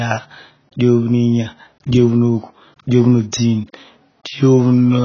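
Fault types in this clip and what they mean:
AAC compression: The speech has nothing above 6.8 kHz, so it sounds dull and muffled for the whole clip. The damage is heavy. Sibilants come out fizzy and smeared. Held vowels take on a watery warble. This points to a very low bitrate, around 16 kbps. The likely cause is AAC-LC coding with too few bits to spend. The encoder dropped the top band and coarsely rounded what remained.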